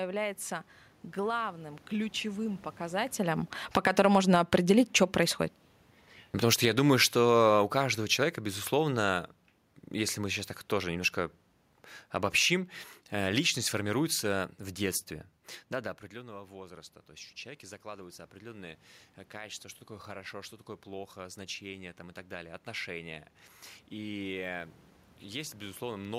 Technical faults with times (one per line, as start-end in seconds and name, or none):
1.19-15.07 automatic gain falling
16.12-26.10 automatic gain rising